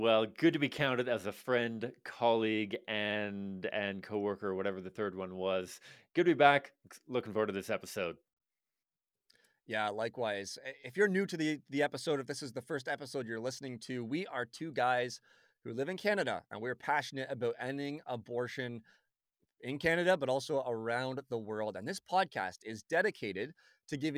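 Nothing goes wrong anywhere in this speech recording, so there are no technical faults to point out.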